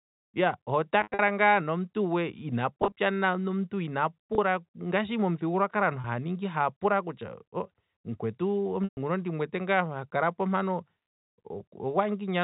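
Brief buzzy, held-over sustains break the speech at 1.01–1.19 s, 2.82–2.92 s, 4.35–4.38 s, 6.01–6.04 s just before "haya pula", and 8.84–8.97 s, where the held sound fades into silence before the speech returns. This is packet loss with pitch repetition: the receiver loops the last pitch period to cover gaps of 30 to 130 ms.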